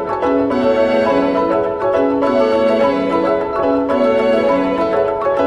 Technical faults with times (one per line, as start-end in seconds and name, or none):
0.51 compressed frames skipped
3.62 compressed frames skipped